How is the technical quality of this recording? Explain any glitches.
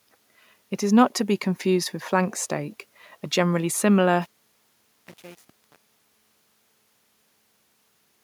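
The speech carries one clear fault. From 4.22 s to the end at 8.23 s, as the fade-out sinks, the sound turns gritty: truncation distortion on a fade, the undithered level stage keeping what sounds like only 7 bits.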